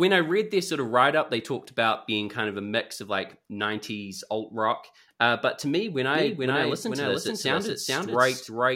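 From 6.15 s to the end, a doubled audio track appears: an equally loud copy trails roughly 0.4 s behind, likely from a second, slower capture path. Unlike echo, it starts abruptly and never decays.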